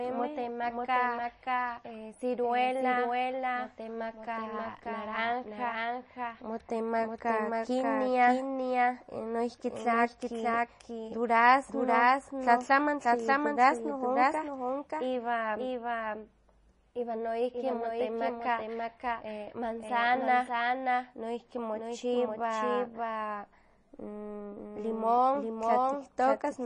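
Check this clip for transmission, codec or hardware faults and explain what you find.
Two faults run through the whole speech recording: a doubled audio track and MP3 compression damage.

Doubled audio track, throughout: a second full-band copy of the speech trails the original by about half a second, at roughly 5 dB below it. The likely cause is either a second capture through a slower path or an edit holding two copies out of step. The copy carries no decay or room colouring, so it sounds like a distinct, clean repeat of each phrase rather than an echo.

MP3 compression, throughout: the damage is plainly audible. The sound has a watery, swirly texture and smeared attacks, and nothing remains above 10.6 kHz. This likely comes from MP3 encoding at a low bitrate, which fits a rate around 32 kbps. Short of bits, the encoder drops weaker frequency lines, which flicker on and off from frame to frame, and it cuts the treble at a fixed point.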